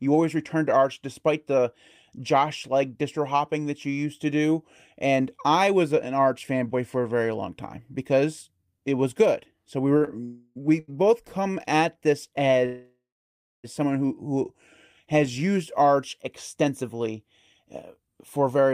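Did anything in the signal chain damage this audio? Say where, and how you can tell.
Yes. Around 10 seconds the speech has three short stalls from a late packet, at 9.97, 10.05 and 10.80 s. A sound is held for about 33, 21 and 83 ms with a faint buzz or dip, then resumes with nothing lost. The jitter buffer ran dry and stretched the last audio while waiting.

There are two call audio freezes. From 10.25 to 10.58 s the last sound is held as a fading buzz or hiss for about 0.3 s. After "come at this", from 12.66 to 13.66 s, the held sound dies away into about 0.6 s of silence. The likely cause is packets delayed in the network, which emptied the jitter buffer.

From 16.55 s to 18.73 s the speech sounds hurried at unchanged pitch, running about 7% fast. This is a jitter buffer speed-up: after the delays the receiver removed many tiny pitch-period slices, roughly 0.15 s in total, to cut its excess latency.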